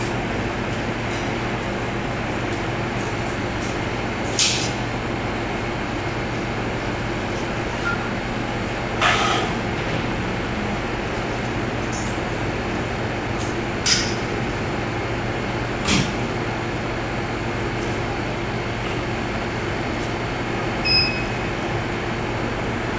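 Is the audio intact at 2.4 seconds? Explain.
Yes, the audio is intact at 2.4 seconds, with no dropout, click, distortion or other break in the signal at that point.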